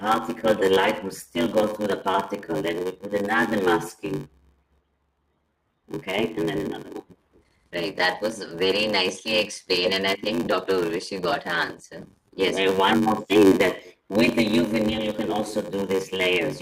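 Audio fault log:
throughout, block size mismatch (padded): a steady buzz near 93.8 Hz runs under the audio, which plays at 0.861 times normal speed with pitch roughly unchanged. Each block comes up short and is zero-filled, which fits a 512-sample read size, so a regular gap recurs at that rate.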